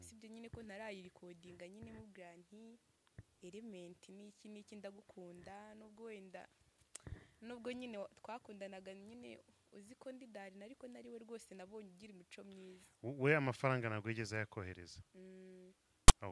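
Right at the end, from 16.08 to 16.12 s, there's a case of file tags played as audio: a block of text tags got read as if it were samples. You hear a short, hard-edged rasp pushed off to one side, then dead silence where the zero padding sits.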